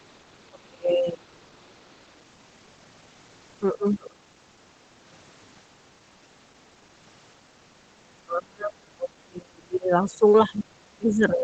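At the very start, from 0 to 0.06 s, and again from 1.31 to 1.72 s, a second, much fainter voice sits under the speech, roughly 40 dB down. This is the other side's voice leaking through, likely because loudspeaker playback reached the microphone and the echo canceller left a residue. On a spectrogram it shows as weak harmonic traces beneath the main speech, below the 8 kHz ceiling of the call path, and it is barely visible on the waveform.

Between those two leaks, from 0.5 to 1.3 s, the speech dips sharply. The same thing happens at 3.73 to 4.3 s, at 8.16 to 10.21 s, and from 10.47 s to the end. The drops reach roughly 20 to 30 dB, and the voice thins or breaks into pieces. This is speech suppressed in double talk: the echo canceller likely mistook the talker for echo while both sides spoke and turned everything down. The waveform shows collapsed envelope stretches, and the spectrogram shows the energy fading out.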